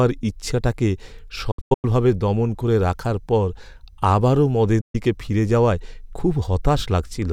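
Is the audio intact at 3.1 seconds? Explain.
Yes, the speech at 3.1 seconds comes through intact, with no dropout, click, distortion or other fault at that point.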